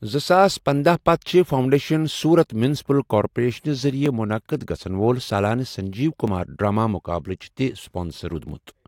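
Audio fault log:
1.84–8.49 s, clock drift buffer slips: A brief click or pop recurs every 2.22 s, about four times, while the speech runs on. Each is likely a buffer dropping or repeating some fifty samples. Two clocks differing by roughly 500 ppm would cause this.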